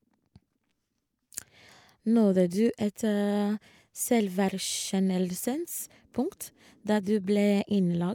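No technical faults can be heard anywhere in this speech recording. From the first moment to the last, the sound carries on without any interruption or disturbance.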